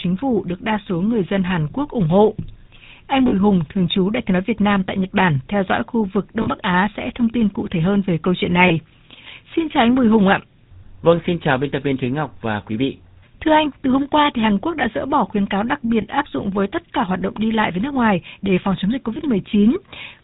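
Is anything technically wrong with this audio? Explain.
Yes. The whole recording of this speech carries the GSM full-rate codec. The voice is buzzy and gravelly, and nothing is passed above 4 kHz, which fits the 13 kbps full-rate mode. Each frame is rebuilt from a vocal-tract model driven by coarse, regularly spaced excitation pulses. The roughness is built into every syllable, unlike band-limiting alone, which only dulls the sound.

There are lost GSM frames at 3.28–3.34 s, at 6.42–6.48 s just after "theo dõi khu vực", at 8.68–8.72 s after "hơn về câu chuyện", at 16.02–16.06 s between "bỏ khuyến cáo đặc" and "áp dụng với tất", and at 19.14–19.19 s. These gaps fit one or two dropped 20 ms frames. The decoder repeats the last good frame, so each one is a brief metallic ring rather than a click or a silent dropout.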